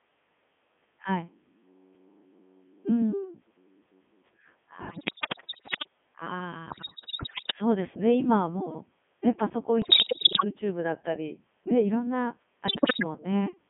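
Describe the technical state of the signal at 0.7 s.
At 0.7 s the speech is already passing through the Codec 2 vocoder, which runs for the whole clip at 3.2 kbit/s within roughly 150 Hz to 3.5 kHz. Only pitch, voicing, energy and spectral shape survive, resynthesised from sine waves, so the heavy damage sounds robotic and buzzy rather than merely muffled or smeared like a band-limited waveform codec.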